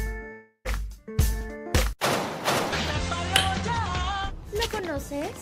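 From 0.32 to 0.66 s the sound smears into a fading buzz, then about 90 ms of silence, and roughly 200 ms never returns. This is likely a long network dropout, longer than a single-packet glitch. At 1.24–1.65 s and again at 3.62–4.29 s, jitter buffer speed-up trims about 40–50 ms in tiny slices, so playback runs 108% fast at unchanged pitch, unlike a pitch shift.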